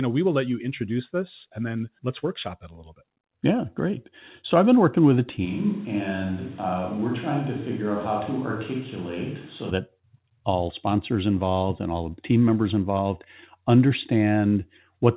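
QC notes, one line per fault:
5.47–9.69 s, switch to a distant microphone. After "been working with a", the sound turns suddenly roomy and hollow, thinner and about 5 dB quieter, with room noise near 25 dB down. A far microphone likely took over. The close sound returns at "that all sponsors involved".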